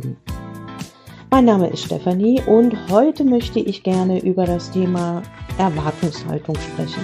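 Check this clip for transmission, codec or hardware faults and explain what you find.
One fault is present: a Bluetooth SBC bit pool drop from 3.60 s to the end of the clip at 7.04 s. From that point the treble goes dull and a gritty, grainy noise rises under the sound, persisting to the end. This happens when a congested wireless link forces the sending device to shrink the SBC bit pool, here consistent with a fall from about 31 to 13, near 94 kbps. Starved of bits, the highest sub-bands are dropped and the remaining ones are coarsely quantised.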